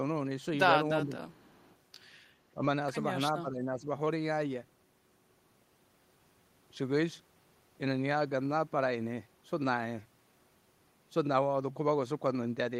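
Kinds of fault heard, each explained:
Speech suppressed in double talk: from 1.02 to 1.23 s and again from 3.34 to 3.88 s the speech dips, by roughly 15 dB first and about 10 dB the second time. That's likely the echo canceller pulling everything down while both ends talk at once.
Echo leak: between 1.29 and 1.75 s there's a faint trailing copy of the speech, about 35 dB down, arriving 362 ms behind it. Likely the far end's canceller letting some loudspeaker pickup slip back through its microphone.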